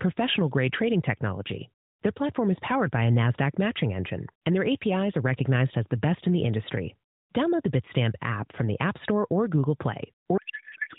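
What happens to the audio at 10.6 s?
A codec payload misread sets in from 10.38 s to the end: octet-aligned AMR frames parsed as bandwidth-efficient, misplacing fields, so the speech becomes garbled noise and warble.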